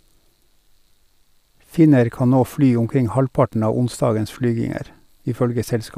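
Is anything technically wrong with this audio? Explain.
Yes. At 3.53 s a single sharp tick cuts across the speech, a bit error spike: one flipped bit throws a lone sample to about -19 dBFS.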